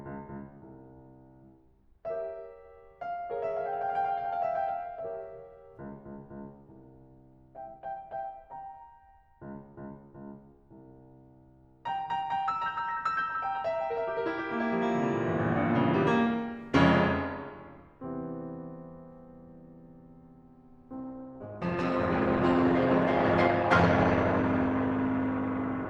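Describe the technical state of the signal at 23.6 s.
Adaptive stream at a lower bitrate, running from 20.97 s to the end of the clip: the stream switched suddenly, with no gap, to a leaner encoding, consistent with Opus dropping from about 64 to 16 kbit/s. At 23.6 s the music has nothing above 12.1 kHz and shows more codec artefacts.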